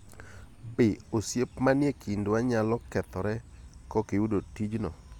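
A short bit of speech, and nothing technically wrong turns up anywhere in it.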